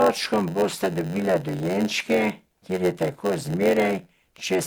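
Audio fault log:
throughout, generation loss: The speech sounds swirly, smeared and hollow, and consonant onsets are blurred. This is likely repeated MP3 re-encoding, around seven passes, at something like 96 kbit/s. Each pass quantises on a shifted frame grid, so noise and spectral gaps pile up.
throughout, block size mismatch (padded): A steady buzz sits at about 92 Hz. One stage writes shorter blocks than the next reads, and zeros fill the remainder. That inserts a brief gap each block. Speech runs at 0.919 times normal speed, with timbre essentially unchanged.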